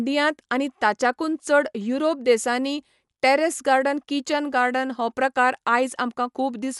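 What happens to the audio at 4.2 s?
At 4.2 s the speech carries the same damage heard across the whole clip, which is likely Dolby Digital compression. Nothing reaches above 11.5 kHz, so the top end sounds dull, and quieter spectral detail is replaced by a rough, fluttering noise that sits around the tonal parts. This happens when the encoder is short of bits and sends many frequency lines with no detail, leaving the decoder to fill them with noise. The plainly audible damage points to a low bitrate, roughly 64 kbps.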